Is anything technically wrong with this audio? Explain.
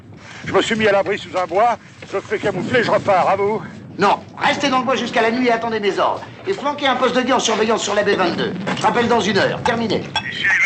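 Yes. From the start to 7.4 s the audio shows a resampler restarted on every block. Each 100 ms block was converted from 44.1 kHz to 48 kHz in isolation, so every block edge carries a small discontinuity. That gives a 10 Hz tick train that follows the signal. On a spectrogram it shows as faint vertical lines every 100 ms, and on the waveform as small steps at block boundaries.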